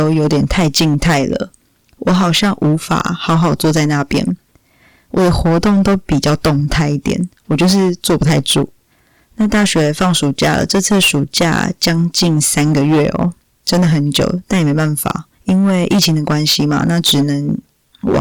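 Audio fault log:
Throughout: hard clipping. The speech is driven about 18 dB past the level the chain can pass, so every peak is sliced flat at the ceiling, and roughly a seventh of all samples sit pinned there. Those squared-off tops generate a dense spread of high harmonics that were never in the source. With overload this heavy, the result is a harsh, buzzing fuzz on every loud syllable rather than occasional crackle.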